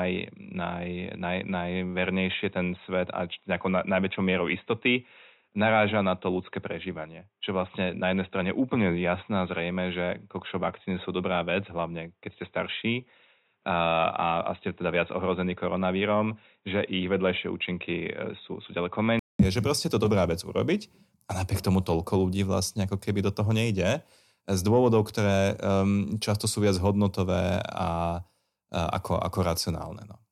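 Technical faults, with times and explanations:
0.00 to 19.39 s, input switched to a poorer device: The speech sounds dull and boxy, with nothing above 3.8 kHz. A faint new hiss sits far below it. About 0.2 s of silence precedes fuller sound, with no level jump. A narrower-band microphone was likely in use.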